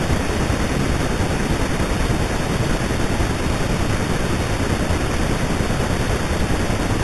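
From start to finish the speech carries imaging from sample-and-hold upsampling. The band stops near 4 kHz, and a mirrored copy fills 4 to 8 kHz at about 16 dB below the signal, which points to an 8 kHz source raised to 48 kHz by holding each sample. The copy is a bright metallic fizz that rises and falls with the speech, unlike steady hiss.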